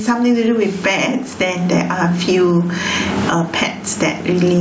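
From start to finish the speech is squashed: quiet and loud passages sit unnaturally close together and the speech sounds flattened. This is gain pumping, with a swing of around 20 dB. It is likely caused by a microphone gain set far too high, with a fast limiter or compressor clamping down on each loud syllable and releasing between them.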